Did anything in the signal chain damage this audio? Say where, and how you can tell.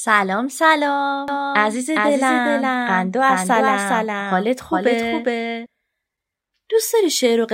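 Yes: from 1.28 to 5.66 s the speech has a doubled audio track, a second clean copy trailing by roughly 0.4 s at about 5 dB lower, most likely a slower duplicate capture path.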